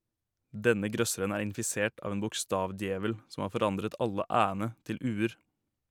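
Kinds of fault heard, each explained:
Dropped samples: a handful of samples, a fraction of a millisecond's worth, were likely skipped in the stream, so the waveform leaps to a later value. At 1.0 s, just before "er infisert av en", this sounds as one sharp click with a thin vertical spectral line.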